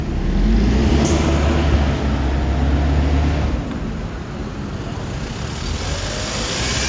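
No technical fault can be heard anywhere in this recording of sounds. There is nothing here that needs a time mark or an explanation.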